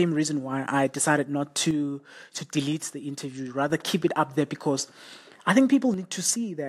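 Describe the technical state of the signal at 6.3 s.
The speech drops abruptly by about 6 dB from 5.94 s to 6.69 s, consistent with one channel dropping out, likely losing one stereo side before the mono sum.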